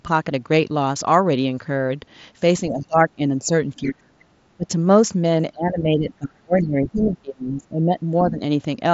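Speech suppressed in double talk appears at 2.69 to 3.22 s, 3.39 to 3.52 s, 3.77 to 4.2 s, 4.57 to 4.7 s, 5.52 to 7.99 s and 8.21 to 8.41 s. The likely cause is an echo canceller that heard both sides at once and, unable to tell the talker from loudspeaker echo, pulled the level down. The voice sinks by about 10 to 30 dB, worst near 4 s, and is held down through much of the long stretch after 5.5 s, over a Bluetooth mSBC path with nothing above 7.7 kHz.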